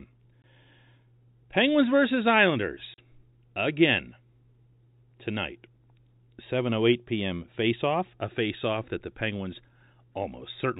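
Speech carried over G.711 telephone coding, band-limited to 4 kHz, with packet loss filled with silence: hard-edged gaps of 20 ms at 0.42 to 0.44 s and 40 ms at 2.94 to 2.98 s, consistent with one and then two lost 20 ms packets replaced by silence.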